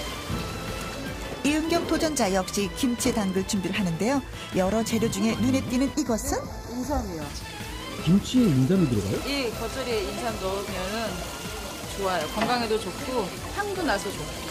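From 5.94 to 7.22 s, one channel runs late by a tiny fraction of a millisecond, and summing the two to mono produces channel delay comb filtering: cancellations at evenly spaced frequencies, the first around 3 kHz, leave the sound hollow and phasey.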